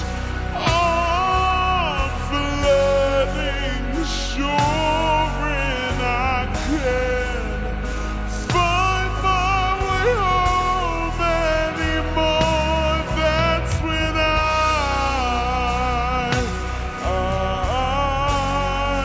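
A wrong sample rate runs throughout, consistent with 24 kHz audio played at 16 kHz without conversion. The sound slows to 0.667 speed and drops 7 semitones.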